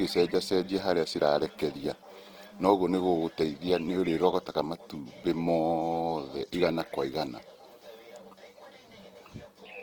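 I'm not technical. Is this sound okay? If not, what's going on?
No. From start to finish the speech sounds grainy and rough, with noisy fizz filling gaps, most likely heavy Opus compression squeezing the audio too hard.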